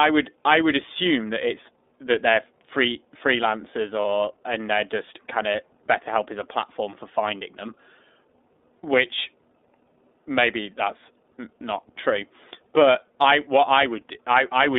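Speech coded with the iLBC codec, confined to roughly 250 Hz to 3.7 kHz with a rough, synthetic edge. The 30 ms framing points to its 13.33 kbps mode, unlike smoother CELP codecs. Lost iLBC frames cause a brief buzzy, held-vowel fill from 4.02 to 4.05 s, one dropped 30 ms frame concealed by pitch repetition, not silence, with instant recovery afterwards.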